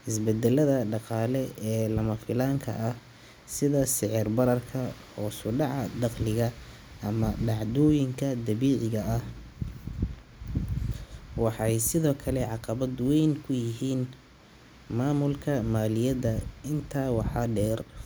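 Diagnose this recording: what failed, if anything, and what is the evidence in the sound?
Nothing in this speech recording points to a failure at any stage of the signal chain. There is no audible evidence to trace to wiring, conversion, buffering, processing, transport or playback.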